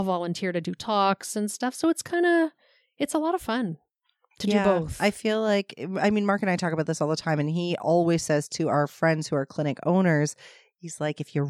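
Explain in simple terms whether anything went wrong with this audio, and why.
Nothing went wrong here; it's a speech recording, and at no point does anything in the sound give away a technical problem.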